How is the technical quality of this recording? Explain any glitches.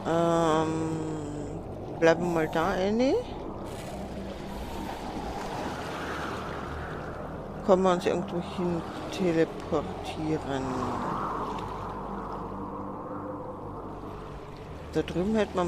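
Nothing to flag here; I listened through and didn't catch a single glitch worth mentioning.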